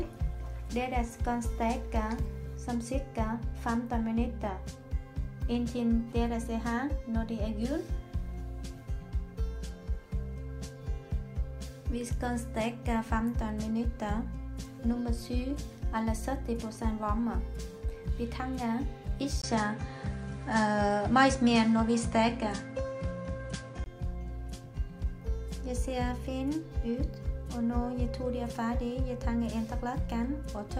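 At 19.42 s the audio drops out for about 20 ms, then returns duller, with nothing above 10.5 kHz, a level shift of roughly 5 dB and a new background noise sitting around 45 dB below the signal. This lasts until 23.86 s, when the fuller sound comes back. The likely cause is the input switched to a poorer device partway through: a narrower-band input with its own tone, gain and noise floor.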